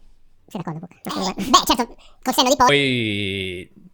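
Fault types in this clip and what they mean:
Section at the wrong speed: from the start to 2.69 s the speech runs 1.82 times too fast, so pitch rises by roughly ten semitones and the voice sounds squeaky and hurried, likely from playback against a mismatched clock. On a spectrogram, harmonics and formants sit stretched upward and syllables appear compressed in time, then drop abruptly to normal spacing at 2.69 s.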